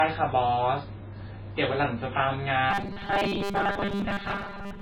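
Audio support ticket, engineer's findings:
Low-bitrate audio saved at a high bitrate, whole clip: hard ceiling, plus smeared, swirly MP3 artefacts. Likely cause: a low-bitrate MP3 source, around 16 kbit/s, re-encoded near 149 kbit/s. The second pass preserved the damage without repairing it. Unlike a genuinely low-bitrate file, the container rate is high while the band limit and artefacts still point to a poor first encode.

Robotic sound from repeated short buffers, 2.71 s to the end at 4.82 s: rigid metallic buzz fixed at 200 Hz, while the speech contour still loosely comes through. Likely mechanism: audio arriving too seldom, with roughly 5 ms chunks replayed to fill the gaps and most of the real signal skipped. Unlike a pitch-correction or vocoder effect, the buzz pitch never moves and sections of speech are simply missing.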